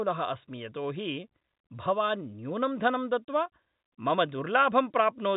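The speech carries no audible technical faults.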